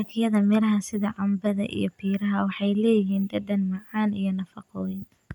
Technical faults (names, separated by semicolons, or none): none